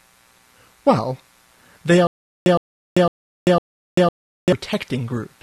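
The playback most likely stalled from 2.07 s to 4.52 s, producing a stutter with silent gaps. Each time it retried, it replayed the last fragment it held and then ran dry. The result is a short burst of about 113 ms repeating four times at a steady rate of one every 504 ms, with roughly 391 ms of dead digital silence after each. Whatever audio belonged in that stretch is gone.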